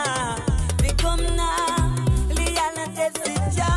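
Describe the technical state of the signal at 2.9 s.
At 2.9 s the signal is inside a wrong sample rate fault running from 0.69 s to 3.23 s. The samples are played back faster than they were captured, with no conversion, which fits material recorded at 22 kHz being played at 24 kHz. The sound runs 1.09 times fast and sits about 1.5 semitones sharp. On a spectrogram every component shifts upward by roughly 9% and features crowd closer in time. The waveform looks compressed horizontally.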